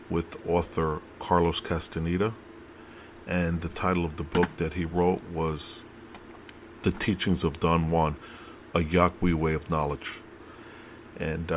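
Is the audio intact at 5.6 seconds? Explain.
Yes, at 5.6 seconds the audio plays through cleanly, with no dropout, click, distortion or other fault at that moment.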